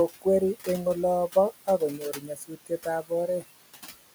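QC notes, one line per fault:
Throughout, noise suppressor artifacts: the suppressor pulls bands it judges to be steady noise down by about 15 dB frame by frame, so the room noise, itself about 15 dB under the speech, dips in the gaps and swells beneath speech.
0.08–0.68 s and 1.97–2.86 s, speech cut by the noise suppressor: the suppressor mistook parts of the speech for noise and lowered them with the background, by about 16 dB in the first span and about 15 dB in the second. Roughly a tenth of a second of the first span and around half a second of the second sound swallowed or faint.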